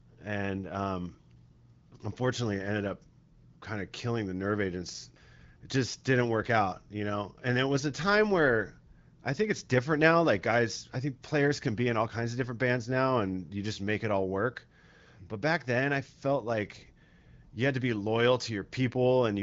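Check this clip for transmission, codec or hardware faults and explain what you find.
No faults can be heard anywhere in this speech.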